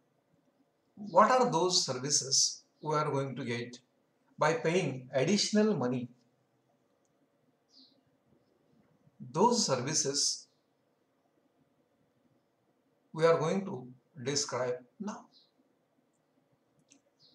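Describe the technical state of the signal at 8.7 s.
Nothing at 8.7 s indicates a technical fault, and the signal is intact at that moment.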